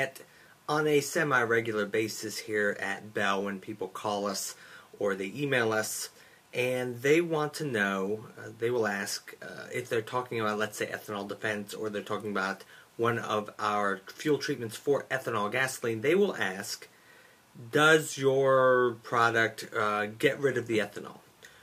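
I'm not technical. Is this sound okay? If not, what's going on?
Yes, this sound is okay, and there's nothing going on with it that needs fixing.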